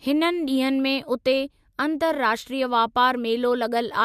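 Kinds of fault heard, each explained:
No kinds of fault are heard in this recording.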